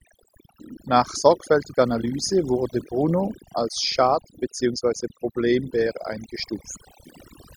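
From start to finish the recording carries overdone noise removal: a noise reducer set far too aggressively has pulled individual frequency bands down to nothing wherever they sat close to its noise estimate, taking the softer parts of the voice along with them. The pauses fall to near silence sprinkled with twinkling specks. A spectrogram shows scattered isolated dots in the gaps and ragged, hole-pocked harmonics under the speech.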